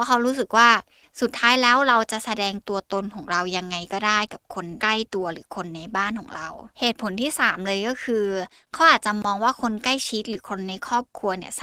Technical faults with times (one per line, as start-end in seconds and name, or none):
10.33-10.37 short concealed packet loss